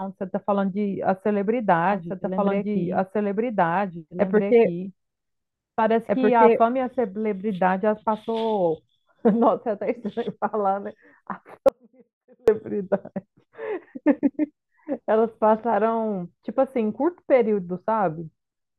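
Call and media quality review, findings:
Doubled audio track, 1.90–6.60 s: full-band second copy trailing about two seconds behind at roughly equal level, dry, with abrupt start and stop. Likely cause is a slower second capture path or an edit holding two out-of-step copies.

Audio dropout to a faint residue, 11.69–12.48 s: speech cuts out abruptly for 0.79 s, leaving only faint sound about 35 dB down, then returns mid-flow. Likely cause is a signal loss upstream while the downstream path stayed live.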